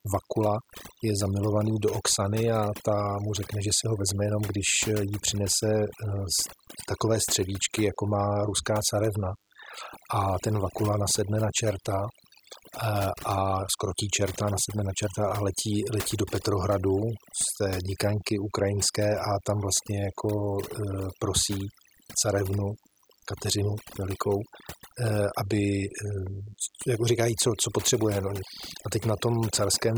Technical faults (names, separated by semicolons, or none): DECT cordless phone buzz; overdone noise removal